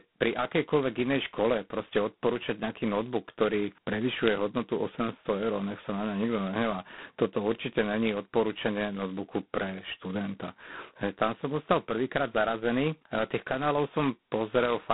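A speech clip carrying heavy G.726 ADPCM damage from start to finish, heard as a harsh, rasping hiss that rises and falls with the speech level, which points to the 16 kbit/s mode, where each sample keeps only two bits of prediction error. The sound sits in a telephone band of roughly 150 Hz to 3.5 kHz. On a spectrogram nothing shows above 3.9 kHz, and grainy noise fills the gaps between harmonics wherever speech is loud.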